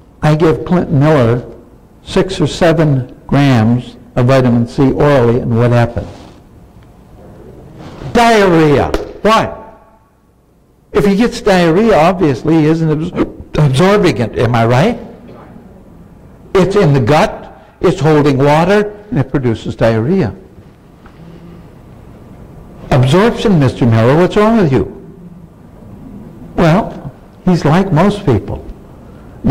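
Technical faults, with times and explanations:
Throughout, hard clipping: peaks overdriven by about 10 dB are cut flat on around a tenth of samples, adding high harmonics heard as harsh fuzz.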